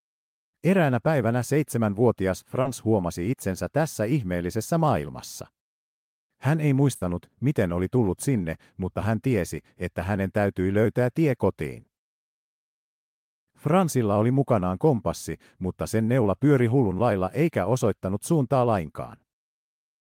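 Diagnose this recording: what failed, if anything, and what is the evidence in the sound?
The network stage failed twice in this speech clip. The first event is a short concealed packet loss from 2.61 to 2.67 s, between "päivänä seitsemänvuotias" and "huomasi itsensä tässä ihmeellisessä". About 40 ms of audio never arrived in time. The receiver covered the hole by extending the last sound, following its pitch if voiced or as shaped noise if not. It then blended back into the real signal. The result is a brief smear at that point.

The second is a burst of packet loss from 6.95 to 7.03 s, just before "miten oli tullut sinne". Here 60 ms of audio was lost, and the receiver filled a 60 ms gap. It continued the preceding sound and turned it down as the gap went on, giving a held buzz or a fading hiss. Playback then resumes, with that 60 ms of the original missing from the clip.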